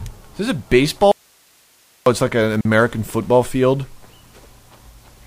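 From 1.12 to 2.06 s the sound drops out abruptly to faint hiss far below its level, an audio dropout to a faint residue, likely a lost signal on a live path. The abrupt change shows it isn't a pause. At 2.61 to 2.65 s a 42 ms gap at a join of encoded pieces opens with smeared edges, then the sound resumes where it stopped.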